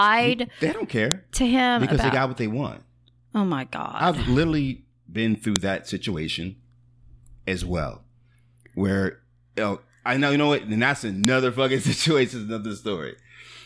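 Separate WAV pieces of this speech were joined without stripping their headers, so each piece's header bytes were played as audio samples: a file header played as audio. The result is a sharp, loud click at about 1.12 s, just before "to him because", at 5.56 s between "I've literally been through" and "that situation", and at 11.25 s right after "know what and that's". Each snap lands at a piece boundary regardless of what the speech is doing.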